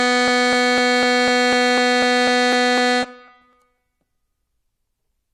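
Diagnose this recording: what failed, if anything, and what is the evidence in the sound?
Periodic USB or driver dropouts at the driver stage. Tiny skips, about half a millisecond each, tick through the music every 0.25 s from 0.28 to 5.28 s.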